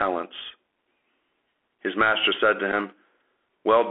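Throughout, the speech sounds thin and boxed-in, with nothing above about 3.4 kHz or below about 300 Hz. Loud bright moments smear into distortion, s sounds turn scratchy, and a grainy hiss sits under everything. This is the Bluetooth CVSD headset codec. It encodes each sample as a single up-or-down bit with an adapting step size, which fits a 64 kbps link. When the signal moves faster than the step can follow, it breaks up audibly.

At 2.72 s a short buzzy tick cuts in, lasting about 7.5 ms. This is a Bluetooth headset packet repeated. Voice data between headset and phone was lost, which fits two missing packets, and the chip decoded the previous packet's bits again in their place. The repeat runs too briefly to build into the steady 267 Hz buzz of a longer dropout, so it is heard only as a small glitch.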